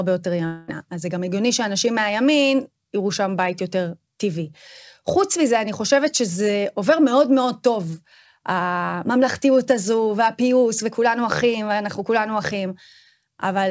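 From 0.46 to 0.70 s, the speech stops and the last sound smears into a fading buzz. No clean silence follows. The audio then resumes with that stretch missing. This is likely a long network dropout on the call path, whose band stops at 8 kHz.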